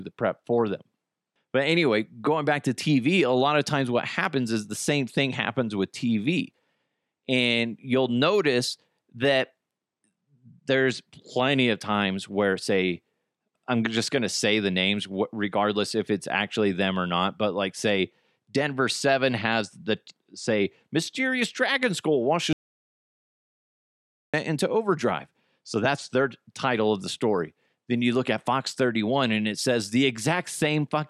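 A speech recording in which the sound cuts out abruptly at 22.53 s, right after "say mysterious dragon skull", and returns at 24.34 s on "into overdrive". The gap is dead silence rather than quiet room tone, so about 1.8 s of speech is simply missing. This audio dropout to silence most likely comes from the input signal being lost for that stretch, through a disconnection, a failed link or a momentary mute, while the recorder kept writing silence.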